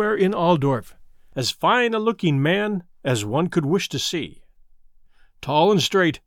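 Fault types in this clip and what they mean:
No technical faults can be heard anywhere in this speech recording. There is nothing to list for any category.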